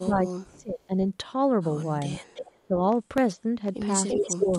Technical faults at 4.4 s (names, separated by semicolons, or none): echo leak; speech suppressed in double talk